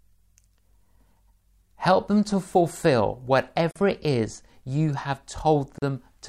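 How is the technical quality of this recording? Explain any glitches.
The recording has two short silences where separately encoded pieces were joined. The first, a gap at a join of encoded pieces, runs from 3.71 to 3.76 s (about 45 ms), between "them to fulfill" and "it is you". The second runs from 5.78 to 5.82 s (about 36 ms). Each piece kept its encoder's start-up delay and final-frame padding, so the speech halts with smeared edges and then resumes exactly where it stopped. Unlike a dropout, no speech is skipped.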